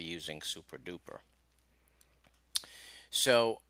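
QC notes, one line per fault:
No technical faults are audible anywhere in the signal.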